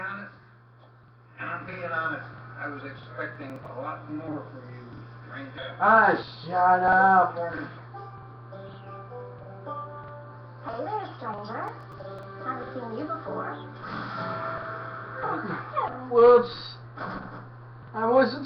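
From 3.36 to 3.66 s and again from 11.68 to 12.23 s, the audio breaks into gritty tearing: processor overload crackle. The processor falls behind and drops a run of very short buffers outright, with the tiny skips suggesting blocks of roughly a millisecond and a half. Each skip joins the audio with a hard edge, and the stretched second burst holds more of them. On a waveform the trace shows small abrupt jumps, and a spectrogram shows clusters of thin vertical broadband streaks across both spans.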